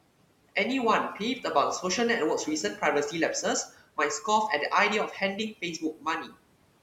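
A speech recording in which the noise suppressor cuts into the speech three times: 3.66 to 3.98 s (about 14 dB down), 5.53 to 6.06 s (about 16 dB) and 6.25 to 6.38 s (about 15 dB). Each time, a short stretch of quiet speech is misjudged as noise and pulled down with the room noise, which sits about 21 dB below the voice. The sound turns faint and swallowed rather than breaking off into silence, which sets it apart from a dropout.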